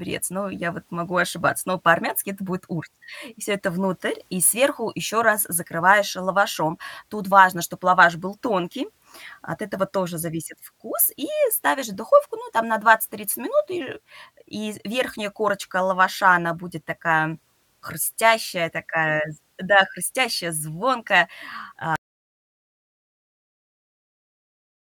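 Speech runs normally until about 21.96 s, then the signal drops to silence for the final 3 s. This is an audio dropout to silence, likely from lost input while recording continued. Unlike a fade or gate, there is no taper and no residual room tone.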